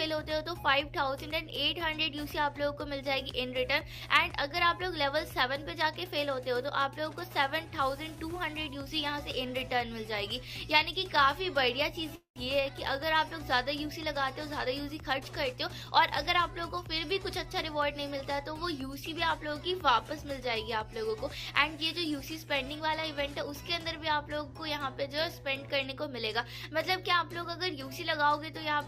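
A steady 60 Hz mains hum runs under the whole recording. It sits only about 15 dB below the wanted sound, so it is clearly audible. A ground loop or a nearby transformer is coupling the power line into the signal. At 12.15 s a call audio freeze begins. It lasts until 12.38 s. The last sound is stretched into a fading buzz or hiss, then about 120 ms of silence. The audio then resumes where it stopped, so nothing is lost. The delay grows by about 205 ms. Packets were likely held up and the jitter buffer ran dry. From 14.65 s to 18.23 s a jitter buffer speed-up follows. The sound plays at about 106% speed without changing pitch, and it feels hurried. The receiver is trimming short pitch-period pieces, about a fifth of a second in total, to shed the extra delay.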